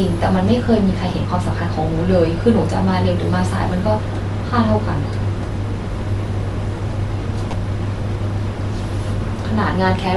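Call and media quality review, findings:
Bluetooth LC3 compression, whole clip: plainly audible codec damage on the speech, with a breathy, grainy edge on upper frequencies. Likely cause is the LE Audio LC3 codec at short frames, consistent with roughly 48 kbps, noise-filling the zeroed upper spectrum. Unlike MP3 or AAC swirl, the grain is smooth noise rather than warbling tones.

Lost LE Audio frames, 7.51 to 7.53 s: brief noisy smear, about 15 ms, fitting two lost 7.5 ms frames. The LC3 decoder repeated the last spectrum with random signs. Unlike a dropout click or hard gap, the sound smears instead of going silent.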